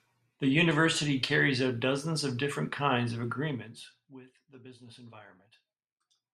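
No technical fault can be heard anywhere in the speech.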